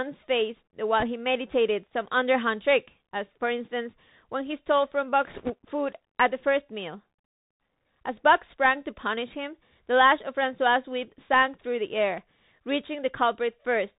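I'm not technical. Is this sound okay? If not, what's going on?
No. The whole recording sounds thin and boxed-in, as if heard through an old phone. The s sounds come out scratchy, and there is a fine, grainy hiss under the speech. This is the Bluetooth CVSD headset codec, the basic format many wireless headsets use for calls. It sends only a tiny up-or-down signal for each moment of sound and cannot carry anything above about 4 kHz. Crisp, bright sounds get cut off, and sudden loud ones get roughened.

There are also two bursts of rushing, crackly noise: a very brief one from 1.00 to 1.04 s, and a longer one from 5.28 to 5.53 s. These are bit errors on a Bluetooth voice link. A small share of the data, around 2 percent, got scrambled on its way through the air. Because this format spreads each sound over many tiny steps, the damage comes out as a rough crackle rather than sharp clicks, and it fades out quickly.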